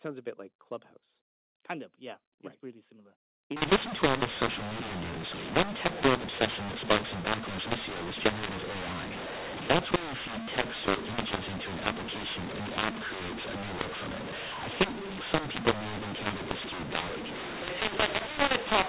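From 3.56 s to the end, the speech suffers a mu-law and A-law mix-up. The telephone audio was coded with G.711 mu-law but decoded as A-law. The two laws map their 8-bit codes to different levels, so each sample lands at the wrong size. Some peaks swell. Others shrink. The quietest samples jump well above silence. The speech turns harsh and gritty, and pauses fill with noise. Before 3.56 s, the 4 kHz-limited telephone sound has none of this grit.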